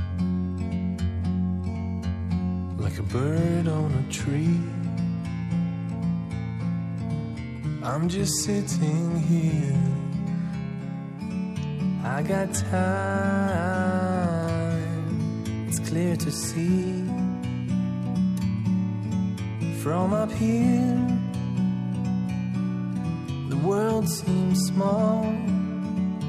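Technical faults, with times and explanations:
0.0–11.18 s, wrong sample rate: audio recorded at 48 kHz is played back at 44.1 kHz with no conversion, so everything runs at 0.919 times its proper speed and sits about 1.47 semitones low, sounding slightly slow, heavy and dragged until the rate corrects at 11.18 s.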